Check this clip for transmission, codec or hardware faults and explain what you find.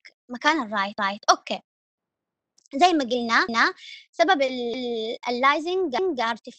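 There is one fault, overlapping chunks, occurring five times: at 0.99–1.24 s, 2.24–2.49 s, 3.49–3.74 s, 4.74–4.99 s and 5.99–6.24 s. The audio was assembled from 1-second blocks, with each new block starting 250 ms before the previous one finished. That quarter-second of sound plays twice at every join, producing a regular stutter that recurs every 1.25 s.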